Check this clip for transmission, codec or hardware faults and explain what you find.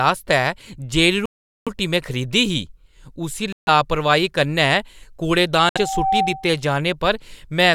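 Two kinds of fault are audible: repeated dropouts and a feedback squeal. Speech cuts to dead silence at 1.26–1.68 s, 3.52–3.69 s and 5.69–5.78 s, then resumes, likely Bluetooth stalls from a starved headphone buffer. The waveform shows flat gaps; the spectrogram shows blank vertical bands. A loudspeaker feedback squeal at 5.54–6.62 s is a steady 771 Hz tone that swells over roughly 0.7 s to about 5 dB above the speech. It forms a bright horizontal line on the spectrogram as the mic-to-speaker loop runs away.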